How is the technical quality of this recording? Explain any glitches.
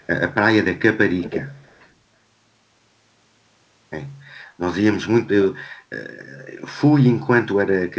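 The recording has an echo leak at two points, heard over a call path whose spectrum stops at 8 kHz, as a wideband codec such as G.722 would produce.

Echo leak, 0.00–0.07 s and 1.18–1.89 s: a delayed copy of the speech arrives 320 ms late, barely audible at first and clearly audible later at roughly 15 dB below the speech. The likely cause is a far-end echo canceller letting its loudspeaker pickup back through. On a spectrogram, faint repeated harmonic patterns trail the originals by 320 ms.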